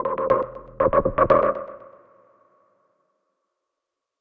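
No technical faults can be heard anywhere in this recording of sounds. Nothing in the audio points to a problem in how it was captured, processed or delivered.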